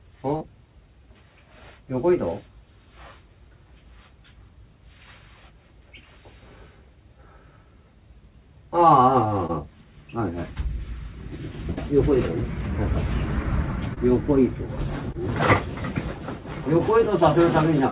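Two bursts of packet loss break the audio, at 0.36 to 0.43 s and at 11.71 to 11.93 s. In each, a run of packets arrived too late or not at all. The receiver stretched the last sound and faded it, about 45 ms of fill for 40 ms lost in the first, and 63 ms for 60 ms lost in the second. The result is a held buzz or fading hiss, then a jump ahead. Three short concealed packet losses also occur, at 9.47 to 9.51 s, 13.94 to 13.98 s and 15.12 to 15.16 s. Each covers about 20 ms. The decoder patched the hole by continuing the preceding sound and blending back. Each is heard as a brief smear or wobble, and a short sound can drop out. All of this travels through a call path with nothing above 4 kHz, which points to G.711 A-law at 64 kbps.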